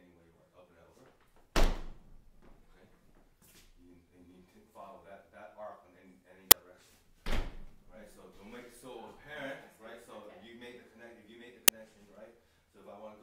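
A sharp, loud crack cuts through at 6.51 s, lasting about 10 ms, and again at 11.68 s for about 5 ms. This is an uninitialised buffer: blocks were played before any audio had been written into them, so leftover memory values came out as samples.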